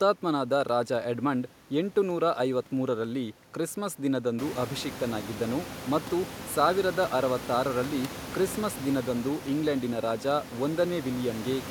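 This is a speech clip, and nothing is technically wrong with it; the room's background noise rises around 4.5 s but stays about 14 dB below the speech.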